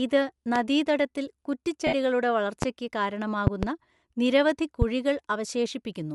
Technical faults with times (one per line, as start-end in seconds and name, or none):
0.00-6.14 Bluetooth LC3 compression
0.56-0.59 loud pop
1.87-1.94 lost LE Audio frames
2.62-2.65 loud pop
3.47-3.66 loud pop
4.82-4.85 loud pop